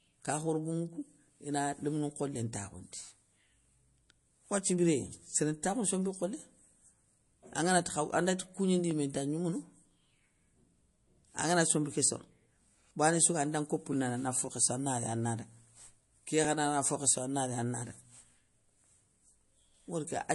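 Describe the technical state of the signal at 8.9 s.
Right at 8.91 s there's a tiny stutter from overlapping chunks: about 12 ms of audio plays twice where one chunk starts before the previous one has finished, just before "yimé inta gnoumounou". The spacing fits chunks of 2.5 s, and you hear it as a brief click.

Underneath that, the whole stretch has a watery, swirly texture with nothing above 11.3 kHz, and the codec damage is plainly audible. That's likely MP3 compression at a low bitrate, somewhere around 48 kbps.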